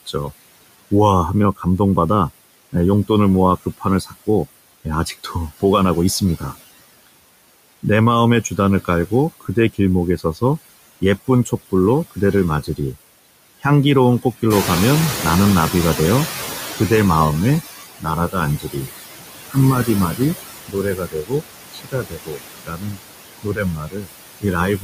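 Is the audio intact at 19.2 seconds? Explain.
No. At 19.2 seconds you're inside a stretch of speech cut by the noise suppressor, running from 18.0 s to the end of the clip. The suppressor is mistaking parts of the speech for noise and pulling them down with the background, by about 22 dB at the deepest, so soft consonants and word endings come out swallowed or faint. All told, roughly three seconds of that stretch get hit this way.

The noise suppressor artifacts, present for the whole clip, are also there at that moment. The suppressor decides band by band, frame by frame, what counts as steady noise, and cuts it by about 19 dB. That leaves the background dropping away between words and coming back up underneath them. The speech itself can take on a thin, watery edge. Around 14.5 s the room noise gets about 10 dB louder and ends up only about 8 dB under the speech, so the suppressor has more to fight here.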